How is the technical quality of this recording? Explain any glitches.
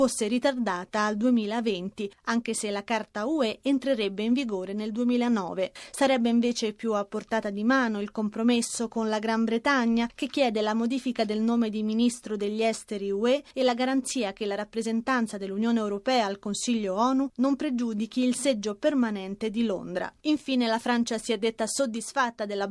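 Listening carefully, nothing in the recording stood out as a technical glitch.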